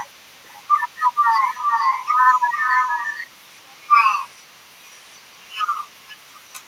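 Speech with an echo leak through almost the whole clip, at 0.04–1.17, 1.34–3.90, 4.28–5.68 and 5.84–6.67 s. A delayed copy trails the voice by about 0.45–0.47 s. It is faint in most stretches but nearly as loud as the speech at 1.34–3.90 s, likely from an incompletely cancelled loudspeaker echo. A spectrogram shows ghost copies of each syllable shifted right.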